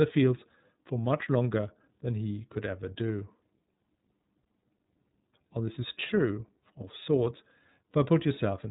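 The speech has been passed through the iLBC codec for its whole length, a narrowband VoIP coder that rebuilds each frame's excitation on its own, here in blocks that fit 30 ms frames at 13.33 kbps. Nothing above 3.8 kHz survives, so the speech sounds boxed-in and telephone-like, and the frame-by-frame coding gives it a plainly audible rough, slightly synthetic texture throughout.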